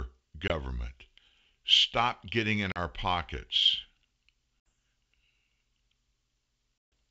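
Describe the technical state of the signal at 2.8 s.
Packet loss on an ADPCM call affects the signal from 2.72 to 2.78 s. About 40 ms of audio, roughly a couple of packets, is missing and replaced by silence, leaving a hard-edged hole in the speech. The G.722 decoder's adaptive predictor and step size then lose step with the sender's, so the speech comes back with some distortion before the ADPCM state resynchronises.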